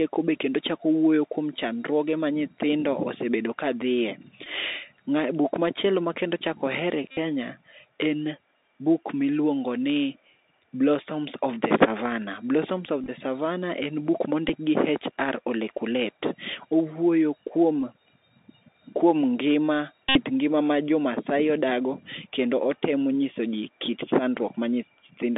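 Speech carried over a Bluetooth CVSD headset codec, with the line squeezed to roughly 250 Hz to 3.7 kHz. The one-bit 64 kbps delta coding leaves scratchy sibilants, slope-overload grit and granular hiss throughout. In six places lost headset packets were filled by repeating the previous one, giving a buzz near 267 Hz: at 4.44 s for about 19 ms, at 7.11 s for 60 ms, at 13.03 s scattered over 45 ms, at 14.49 s, at 17.80 s scattered over 30 ms, and at 20.09 s for about 64 ms.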